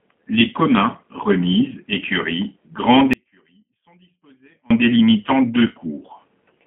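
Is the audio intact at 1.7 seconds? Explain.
No, at 1.7 s you're hearing G.729 codec damage, present throughout: speech rebuilt from a filter and sparse pulses, rough and synthetic, squeezed into roughly 200 Hz to 3.4 kHz.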